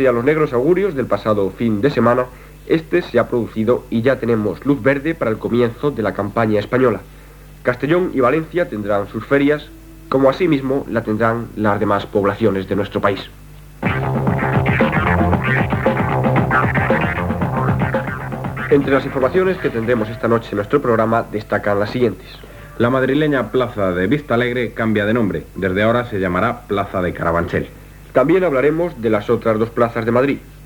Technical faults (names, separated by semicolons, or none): none